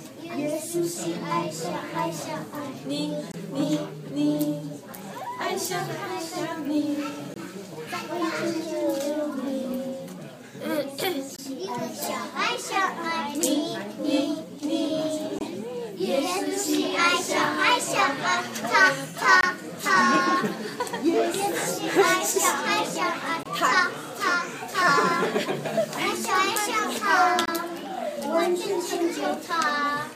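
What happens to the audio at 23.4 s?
A gap between chunks opens from 23.43 to 23.46 s. The audio was carried in 4-second chunks, and at this join about 23 ms of silence was inserted between the end of one chunk and the start of the next. Nothing is lost; the sound simply stops and restarts. It is heard as a brief hole with abrupt edges on both sides, a small stutter.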